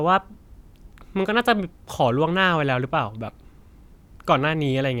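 No technical fault can be heard anywhere in the speech recording. There is nothing to place on a timeline.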